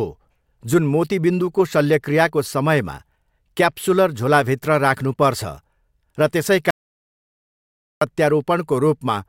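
Speech, with an audio dropout to silence from 6.71 to 8.01 s: 1.31 s of flat, silent waveform and blank spectrogram, likely lost input.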